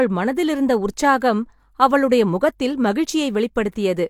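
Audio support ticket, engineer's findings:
Listened to the whole speech recording and nothing turned up worth flagging, so no faults to report on this one.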